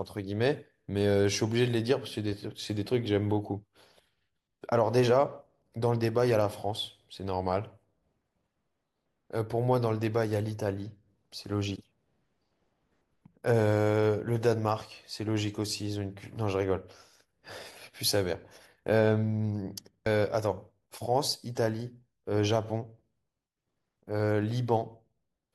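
At 20.05 s there's a quick glitch in the speech: damaged data in the compressed stream, so the decoder misread a frame and had to resync.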